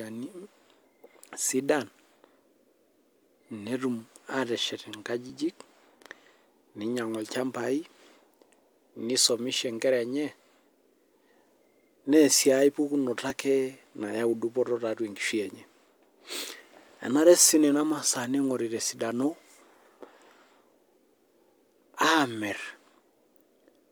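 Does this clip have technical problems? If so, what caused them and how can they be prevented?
Yes. Overlap between stream segments causes tiny skips at 5.30 s, 13.30 s just after "neyau sii aepukunoto", and 15.28 s just after "nayau dupoto tiatua". Neighbouring 2-second segments carry overlapping time stamps, so the player trims 6 to 19 milliseconds of sound that was never duplicated, leaving an abrupt jump in the waveform. Preventing it means having the packager write contiguous, non-overlapping segment time stamps, or having the player crossfade segment boundaries instead of cutting them.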